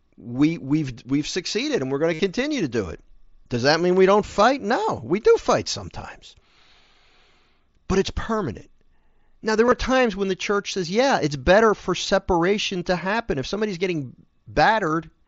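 At 2.13 to 2.20 s and 9.66 to 9.72 s, concealed Bluetooth headset packet loss fills 60 ms, then scattered gaps (longest 22.5 ms), with repeated buzzy waveform rather than silence.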